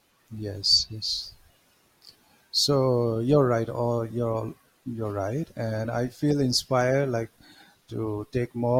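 No dropouts, clipping, glitches or other technical faults can be heard anywhere in the recording.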